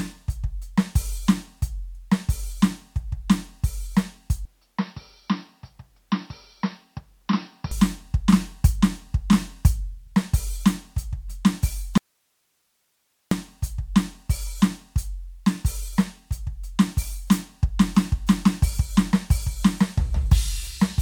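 From 4.45 to 7.71 s the music abruptly turns dull and slightly quieter, with nothing above 5.8 kHz and a new noise floor. It is likely an input switched to a poorer device, not a simple filter, because the tone and background noise change too.

From 11.98 to 13.31 s, an audio dropout to a faint residue cuts the music for 1.34 s, leaving only hiss far below. The hard edges, rather than a fade, point to a likely signal loss.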